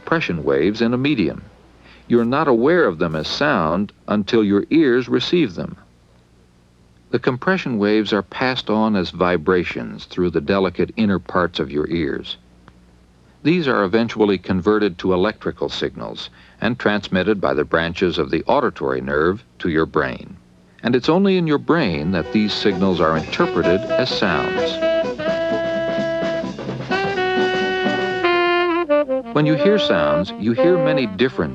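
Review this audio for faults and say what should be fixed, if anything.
A GSM phone buzz runs from 2.18 to 3.34 s, about 29 dB below the signal. A nearby 2G handset transferring data sends radio bursts 217 times a second, and the audio circuitry rectifies them into a raspy buzz that comes and goes with the transfer. On a spectrogram it appears as a comb of lines at 217 Hz and its multiples; the waveform shows a fine repeating pulse train. Keep phones away from the recording chain, or switch them to flight mode.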